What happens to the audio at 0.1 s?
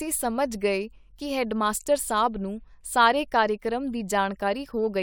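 At 0.1 s the speech plays through intact, with no fault at that moment.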